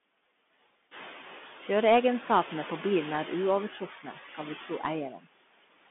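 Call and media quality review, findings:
Noise suppressor artifacts throughout: residual background pumps down by about 17 dB between phrases and swells back under speech. Spectrogram shows the noise floor gated frame by frame; room noise rises near 1 s.

Bluetooth CVSD headset codec throughout: narrowband, scratchy sibilants, granular hiss under speech, and plainly audible slope-overload distortion on loud, bright sounds. Consistent with 64 kbps CVSD delta modulation. Spectrogram is band-limited to roughly 200 Hz to 3.5 kHz, with nothing above 3.8 kHz.

Speech cut by the noise suppressor at 3.73 to 4.4 s, right after "på bilen er", then at 4.61 to 4.84 s and 5.11 to 5.27 s. Suppressor treated quiet speech as noise and cut it by about 10 to 11 dB. Waveform shows short dips in the speech envelope.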